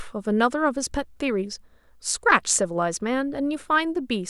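A recording of speech with no audible technical faults anywhere in the signal.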